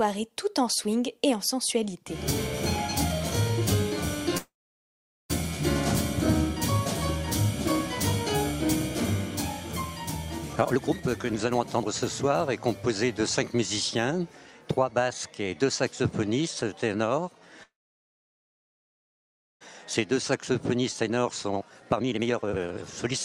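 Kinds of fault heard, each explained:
call audio freeze: The sound stalls into a fading tail and near-silence for about 0.9 s at 4.37 s and 2 s at 17.63 s, then resumes intact; likely delayed packets emptied the jitter buffer.
jitter buffer speed-up: The audio hurries at unchanged pitch, 124% from 10.53 s and 138% from 20.12 s, as pitch-period slices are cut to shed about a second of backlog each time.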